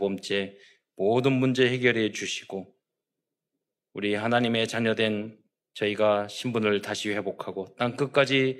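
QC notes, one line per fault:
No faults found on this speech recording; nothing to flag.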